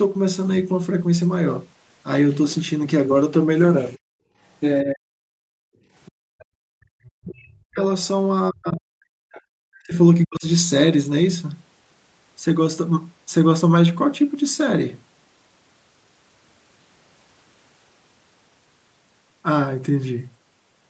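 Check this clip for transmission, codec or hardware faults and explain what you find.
Three echo-canceller faults can be heard in this speech recording: background gating, speech suppressed during double talk, and the other side's voice leaking through. The sound is band-limited at 8 kHz, which is consistent with the Opus call path.

Background gated by the echo canceller, at 3.98–4.35 s, 5.44–6.92 s and 9.31–9.54 s. While the far end played through the loudspeaker, the canceller clamped the microphone by up to about 40 dB. The room tone drops out and then returns once the canceller releases.

Speech suppressed in double talk, at 4.83–5.16 s and more extensively across 7.2–10.45 s. The talker's voice dips by around 40 dB. The likely cause is that both sides spoke at once and the canceller could not tell the local talker from the echo, so it attenuated both.

Other side's voice leaking through, at 6.05–7.1 s and briefly at 9.32–9.41 s. 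A faint second voice can be heard roughly 30 dB and 25 dB below the talker. It is likely loudspeaker echo that the canceller did not fully remove from the microphone signal.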